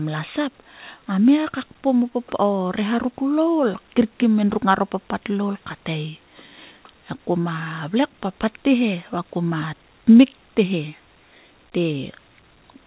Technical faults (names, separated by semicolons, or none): none